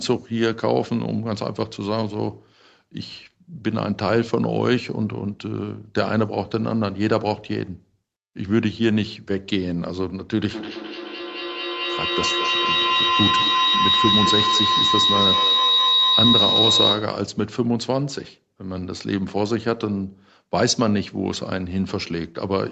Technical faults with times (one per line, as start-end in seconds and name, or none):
10.45-17.30 feedback howl